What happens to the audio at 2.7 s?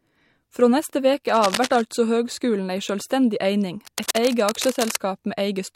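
Nothing goes wrong at 2.7 s: the speech carries on intact there, with no dropout, click, distortion or other fault audible at that moment.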